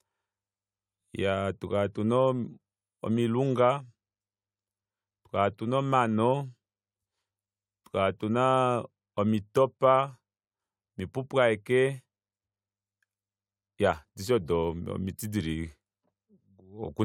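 Nothing goes wrong anywhere in this bit of speech; there's simply no technical fault to point to.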